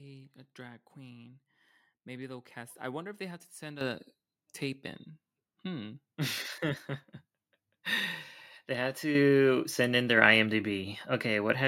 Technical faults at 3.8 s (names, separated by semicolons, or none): microphone volume stepped up